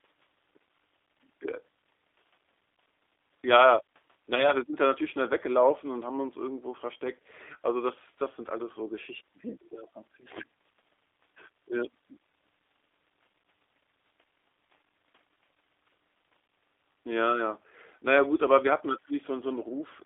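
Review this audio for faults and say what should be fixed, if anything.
Throughout the 20-second speech clip the audio carries plainly audible G.729 codec damage. The band runs only from about 300 Hz to 3.6 kHz, so there is no low body or upper presence. The speech sounds slightly rough and synthetic because the decoder rebuilds it from a vocal tract filter, a pitch predictor and a sparse pulse excitation, which fits an 8 kbit/s G.729A link. Using a wideband codec such as G.722 or Opus on this path would prevent this.

From 4.35 s to 4.52 s there is VoIP packet loss concealed by the speech codec. About 20 ms of audio is missing, which fits a single lost packet. The decoder filled the gap by extending its last pitch and filter with falling gain. Because each frame depends on the one before, the speech stays weakened and smeared for roughly 150 ms after packets resume. Adding jitter buffering, redundancy or FEC on the network path would prevent this.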